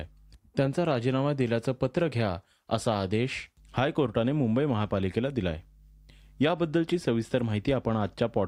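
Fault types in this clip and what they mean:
There are no fault types in this clip to list or explain.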